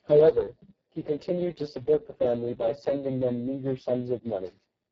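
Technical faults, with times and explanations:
Throughout, Speex codec: the speech sounds hoarse, buzzy and somewhat robotic, with a hissy, noise-like upper band that stops at 7.5 kHz. Heavy damage like this points to a very low bitrate, around 6 kbps, too few bits to model the excitation faithfully.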